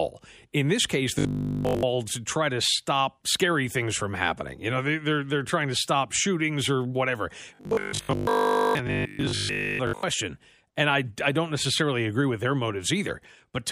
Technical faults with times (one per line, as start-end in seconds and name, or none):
1.19-1.83 robotic sound from repeated short buffers
7.55-10.03 robotic sound from repeated short buffers